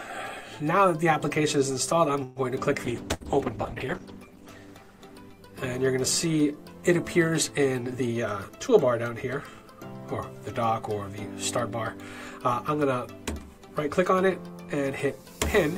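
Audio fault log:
2.23 to 2.39 s, call audio freeze: The sound stops moving forward and the last moment is stretched into a fading buzz or hiss for about 125 ms. It then picks up exactly where it left off, with nothing skipped, so the pause is an added gap rather than a loss. This is likely a jitter buffer running dry while packets were held up in transit, leaving playback about 125 ms later than before.
2.88 to 6.80 s, call bitrate drop: The encoder's rate falls from 96 kbps to 11 kbps and stays at the floor for about 1.3 s. This happens because the call's bandwidth estimate dropped, so Opus must code with far fewer bits. The coarser coding makes the sound rough and watery. At 11 kbps the upper frequencies are also discarded, giving a muffled, narrowed tone until the rate climbs back by 6.80 s.
3.14 to 3.23 s, burst of packet loss: Within the low-bitrate stretch, a run of packets fails to arrive in time for playback. 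The receiver extends the last sound for about 65 ms, letting it sink into a held buzz or decaying hiss. It then jumps ahead, so about 60 ms of the original sound is simply gone. The result is a brief smeared tail followed by an abrupt join.
7.98 to 8.68 s and 9.09 to 9.71 s, jitter buffer speed-up: The jitter buffer had built up more audio than its target. The receiver trims it by cutting out many short pitch-period-sized slices, roughly 70 ms in each stretch. Playback runs at about 108% and then 109% speed with pitch unchanged. The sound therefore seems briefly hurried.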